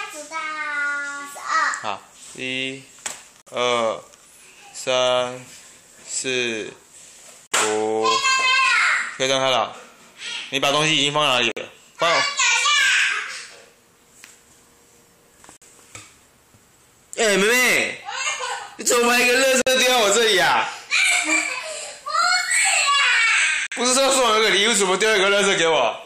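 The sound breaks into a gap between chunks six times, at 3.42, 7.47, 11.52, 15.57, 19.62 and 23.67 s, each a 50 ms hole with hard edges. This fits 4 s chunks joined with silence between them. The waveform shows flat-line dropouts, and the spectrogram shows clean vertical blank stripes.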